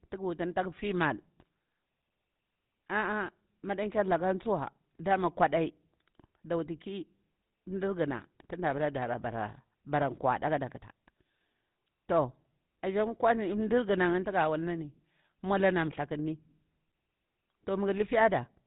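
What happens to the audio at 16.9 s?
At 16.9 s the speech is coloured by GSM full-rate codec damage, which runs through the whole clip rather than starting there. The codec reduces the signal to a vocal-tract filter driven by a regular pulse excitation, retaining only one excitation sample in three, and discards everything above 4 kHz. The result is a plainly audible buzzy, gravelly roughness over band-limited speech, consistent with a 13 kbps bitrate.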